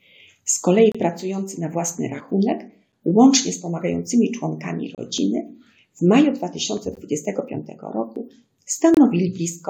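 The audio has two overlapping rhythms of dropouts. The first is a gap between stream segments, short hard-edged silences at 0.92, 2.92, 4.95, 6.95 and 8.94 s, lasting from about 7 to 30 ms. They come every 2 s, so the segment timestamps don't quite meet and the player pads the holes with silence, though nothing is actually lost. The second set is skips at 2.20, 5.18 and 8.16 s, each jumping over a sliver of sound of around 20 ms with no silence in between. They repeat every 3 s, so the likely cause is audio missing between chunks, dropped while one 3-second chunk closes and the next opens.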